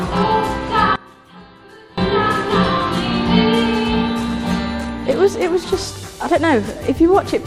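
From 0.96 to 1.98 s the sound drops by about 22 dB. One channel inverted is the likely cause, cancelling the shared content when summed.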